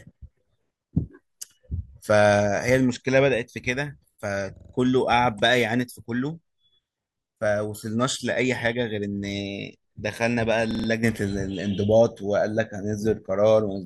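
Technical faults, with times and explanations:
4.57–4.74 s and 10.71–10.88 s, repeated buffer: new audio arrived late, so a 43 ms slice played five times in a row, heard as a brief rattling stutter. The timing fits a 2048-sample buffer. The waveform shows identical copied blocks, and the spectrogram shows a thin vertical seam at each hard join.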